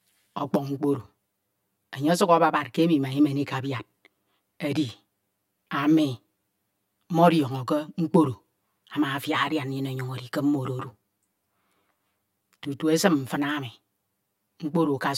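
Speech with channel delay (comb filtering) throughout: one channel lags about 10 ms before mono summing, notching the spectrum from roughly 50 Hz upward and sounding hollow.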